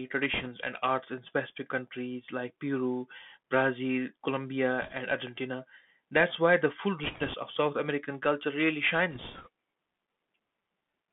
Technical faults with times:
0.00-11.13 Bluetooth CVSD headset codec
0.34-0.48 bit errors on a Bluetooth voice link
4.82-4.93 bit errors on a Bluetooth voice link
7.04-7.34 bit errors on a Bluetooth voice link
9.11-9.48 bit errors on a Bluetooth voice link

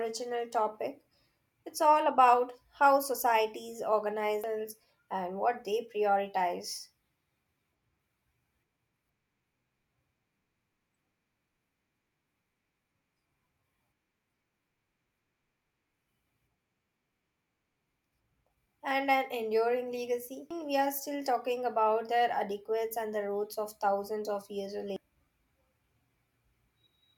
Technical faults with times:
4.44 damaged data in a compressed stream
20.51 damaged data in a compressed stream
24.96 damaged data in a compressed stream

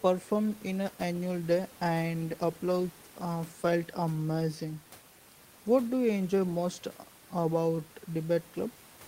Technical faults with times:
none

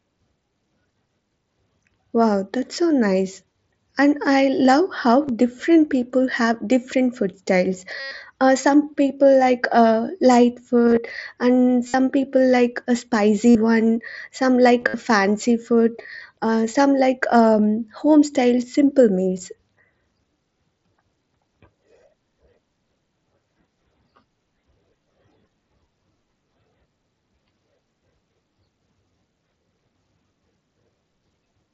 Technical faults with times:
3.53 concealed Bluetooth headset packet loss
5.23-5.29 concealed Bluetooth headset packet loss
8.00-8.11 concealed Bluetooth headset packet loss
10.87-10.97 concealed Bluetooth headset packet loss
11.88-11.94 concealed Bluetooth headset packet loss
13.50-13.55 concealed Bluetooth headset packet loss
14.80-14.94 concealed Bluetooth headset packet loss
16.02-16.05 concealed Bluetooth headset packet loss

